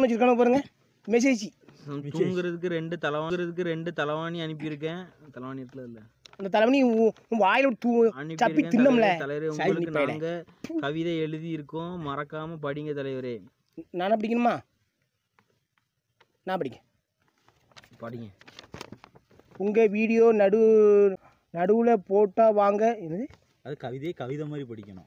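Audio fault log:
3.30 s and 21.16 s, CD skip: a tick and a very brief mute, then the sound carries on from another point, as the laser jumps to a different turn of the disc's spiral.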